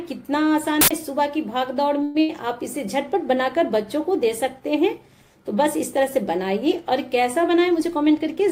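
An uninitialised buffer at 0.81 to 0.91 s produces a short, loud burst of digital noise lasting about 93 ms, which fits a 4096-sample block being played out before any audio had been written into it, so stale memory contents came out as samples. At 2.03 to 2.17 s the last sound is stretched into a buzzy, hissy continuation that fades over about 114 ms without dropping to silence, after which the audio picks up exactly where it stopped. This is a call audio freeze, likely from delayed packets draining the jitter buffer. Nothing is lost, but the stream now runs about 114 ms later. Right after, a burst of packet loss at 2.21 to 2.31 s again holds the last sound and turns it down, this time for about 80 ms, but the audio resumes further along, so that 80 ms of material is simply gone. From 7.43 to 8.48 s a jitter buffer speed-up makes the sound run hurried at about 107% speed with its pitch unchanged, as the receiver trims short pitch-period-sized pieces many times over, around 70 ms in total, to shrink an overfull buffer.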